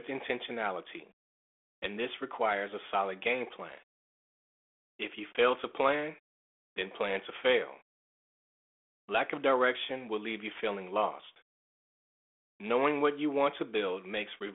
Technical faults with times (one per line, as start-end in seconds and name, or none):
none